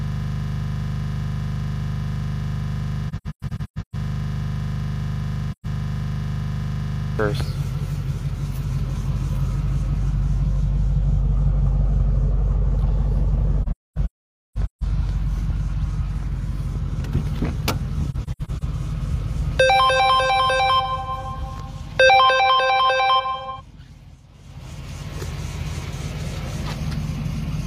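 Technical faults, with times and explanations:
0.00–7.19 s, system hang loop: the clip opens with this already under way. A single 40 ms slice of audio repeats exactly, about 179 times, so it sounds like a steady buzz at 25 Hz rather than a stutter. The machine stalled while the sound hardware kept replaying the same short ring buffer. Unlike a dropout or glitch, nothing new is heard; the identical fragment repeats until the system recovers.
3.08–3.95 s, 5.52–5.66 s, 13.62–14.83 s and 18.10–18.63 s, AAC frame loss with muting: the sound drops into soft-edged silences. The first gap totals about 0.6 s across 0.85 s, the second is a single 0.13 s hole, the third totals nearly 1 s across 1.2 s with one stretch of about half a second, and the last totals 0.26 s across 0.5 s. Each hole fades out and in over roughly 40 ms. The decoder zeroed the spectrum of missing frames, and the overlapping windows smear those edges. 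That smooth fade separates these gaps from hard digital dropouts.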